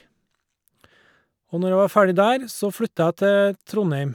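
No audible technical faults turn up anywhere in this speech recording.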